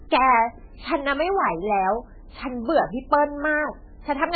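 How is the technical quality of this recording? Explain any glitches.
Poor, because heavy compression damage runs through the entire recording.

Likely MP3 compression, from start to finish: the encoder split the sound into narrow frequency lines and, starved of bits, dropped the treble entirely, leaving nothing above 4.5 kHz, which fits a very low bitrate of around 9 kbps. Weak lines also flicker on and off between frames, so the speech sounds muffled and watery, with a swirling, metallic edge on s sounds and smeared consonant onsets.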